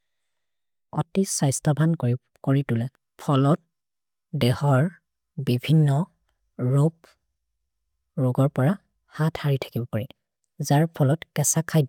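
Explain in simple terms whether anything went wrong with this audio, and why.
Nothing went wrong with this speech recording: the signal holds steady throughout, with no technical fault to be heard anywhere in it.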